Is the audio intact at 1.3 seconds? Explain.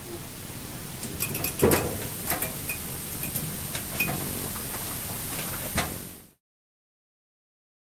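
Yes, the audio is intact at 1.3 seconds, with no fault at that moment.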